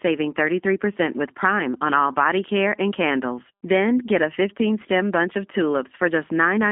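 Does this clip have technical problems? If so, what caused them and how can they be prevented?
Yes. G.729 codec damage runs throughout: the speech sounds rough and synthetic, with nothing above 3.7 kHz. The codec rebuilds each 10 ms frame from a vocal tract filter, pitch predictor and sparse pulses, which fits an 8 kbit/s stream. Using a wideband codec such as G.722 or Opus prevents this.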